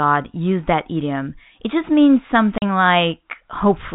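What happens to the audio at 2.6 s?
Right after "just means", the audio drops out completely from 2.58 to 2.62 s. This is packet loss filled with silence: about 40 ms, consistent with two 20 ms packets, replaced by silence. Unlike concealment, which smears or repeats sound, this gap is dead quiet with hard edges.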